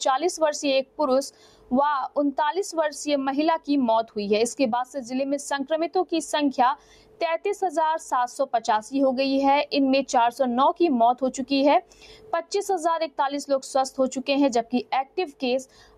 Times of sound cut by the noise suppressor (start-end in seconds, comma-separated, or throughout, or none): 0.83-1.00, 1.31-1.72, 6.76-7.22, 11.82-12.51, 14.64-15.98